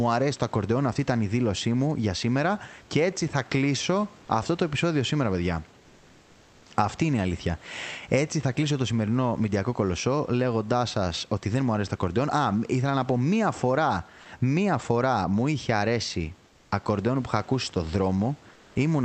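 Speech over a call line, and twice the real room background gets swapped for flat, featureless hiss. That's comfort noise in place of the background, from 16.47 to 16.71 s, between "φορά μου είχε αρέσει" and "ακορντεόν που είχα ακούσει", about 4 dB quieter, and again from 18.53 to 18.75 s, about 3 dB down. The likely cause is Opus DTX pausing the sender while the receiver fills in synthetic noise.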